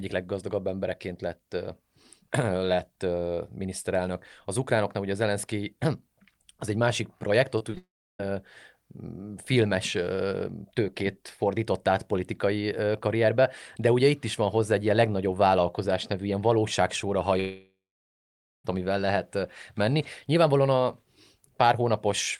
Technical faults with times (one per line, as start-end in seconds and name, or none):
7.58-7.77 repeated packet loss (robotic sound)
7.77-8.20 long network dropout
17.40-18.65 long network dropout